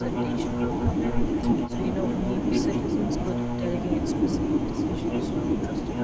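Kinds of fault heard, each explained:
Speech suppressed in double talk: The speech briefly dips seven times, at 0.02, 0.85, 1.76, 2.79, 3.24, 4.5 and 5.09 s. Each dip lasts from a few hundredths of a second to about 0.15 s. At its deepest the level falls by roughly 10 to 15 dB. The likely cause is an echo canceller reacting while the far side talks at once. It mistakes this talker for loudspeaker echo and turns both down.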